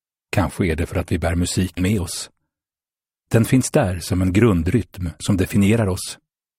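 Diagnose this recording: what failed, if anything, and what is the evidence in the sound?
The codec stage failed with compressed frames skipped. Around 1.77 to 1.81 s the sound jumps forward by roughly a tenth of a second, consistent with a handful of 20 ms frames going missing or being rejected by the decoder.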